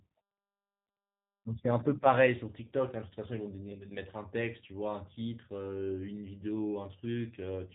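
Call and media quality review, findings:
Speech rough and faintly synthetic for the whole clip, thin-edged, plainly audible; nothing above 4 kHz. Component: G.729 codec in the voice path, consistent with G.729A at around 8 kbit/s. Mechanism: speech rebuilt every 10 ms frame from vocal tract filter, pitch predictor and four pulses per half-frame; fine spectral and waveform detail discarded, producing the coarse, synthetic texture and band limit.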